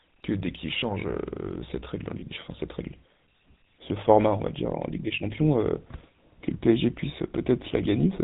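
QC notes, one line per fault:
throughout: GSM full-rate codec. The speech carries a steady buzzy, gravelly roughness, plainly audible, and nothing reaches above 4 kHz, which fits the 13 kbps full-rate coder. The coder models the vocal tract and rebuilds its excitation from evenly spaced pulses that keep only every third sample, so voicing turns grainy. Unlike a plain low-pass or narrowband telephone channel, the band limit comes with this rasp built into the voice itself.
2.20–2.23 s: lost GSM frames. For a moment the sound freezes into a short, rough, metallic ring instead of continuing, because the decoder replays the last good frame's settings. The gap points to a single 20 ms frame, so the ring is too brief to fade into silence. Unlike a dropout or click, there is no hole or snap, only a smeared, buzzy repeat.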